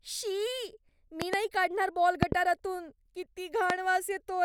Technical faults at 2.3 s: loud pop

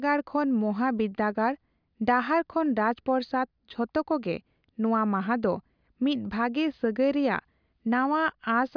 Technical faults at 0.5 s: none

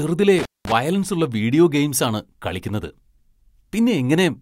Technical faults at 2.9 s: none

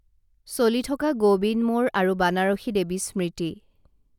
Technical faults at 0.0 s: none

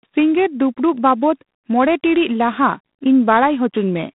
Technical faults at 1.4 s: G.726 ADPCM

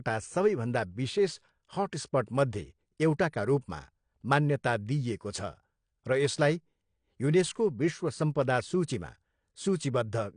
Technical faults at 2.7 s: AAC compression

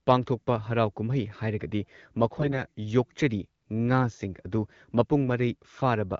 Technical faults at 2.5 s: AMR bit errors

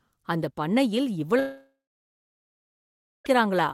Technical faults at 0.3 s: none

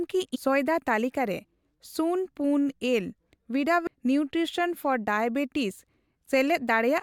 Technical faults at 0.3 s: damaged data in a compressed stream

